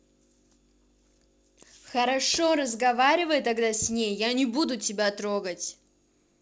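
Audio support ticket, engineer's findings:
No faults found in the speech audio.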